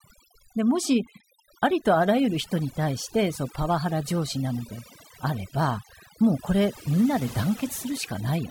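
From the first second to the last, the speech carries overdone noise removal. A noise reducer was pushed too hard, so any frequency band sitting close to what it took for noise got pulled way down or shut off entirely, and the softer bits of the voice were swept out along with the noise. You hear it as a background that drops and breaks up into little twinkling specks.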